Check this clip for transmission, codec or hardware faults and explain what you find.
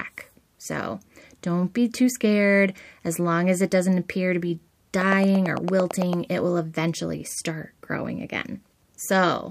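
There is one fault, a train of clicks. From 5.01 to 6.14 s, after "doesn't appear to be" and before "it will eventually start", around ten regular clicks arrive about nine per second. They rise roughly 10 dB above the speech, likely from interference or a faulty connection or power supply.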